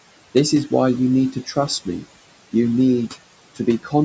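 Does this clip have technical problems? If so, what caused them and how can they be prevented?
Yes. Noise suppressor artifacts run through the whole clip. The background is pulled down by about 18 dB, so the leftover noise dips between phrases and rises under the speech. Prevent this by lowering the background noise at the microphone so the suppressor can work more gently.

Speech cut by the noise suppressor occurs from 1.32 to 1.69 s, dipping about 11 dB, and from 3.83 to 3.92 s, dipping about 13 dB. The suppressor mistook quiet speech for noise, so roughly a tenth of a second of it in each span sounds swallowed. Prevent this by speaking closer to the microphone or using a less aggressive suppression setting.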